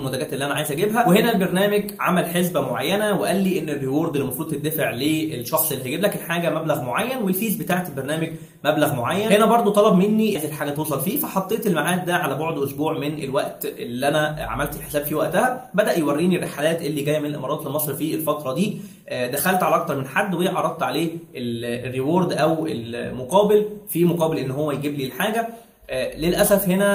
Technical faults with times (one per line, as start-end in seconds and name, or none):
10.35 skip ahead
10.77-11.55 jitter buffer speed-up
12.00-13.12 jitter buffer speed-up
14.96-16.30 jitter buffer speed-up